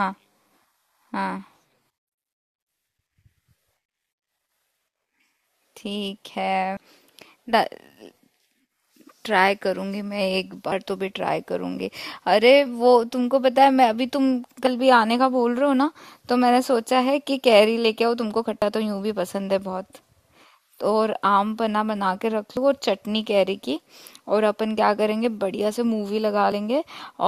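At 2.82, 6.77, 10.72, 14.67, 18.62, 22.57 and 26.52 s the speech skips forward. Each time roughly 50 ms is lost, and the two sides join with no silence. The steady spacing points to audio missing between chunks, likely from processing in 4-second blocks.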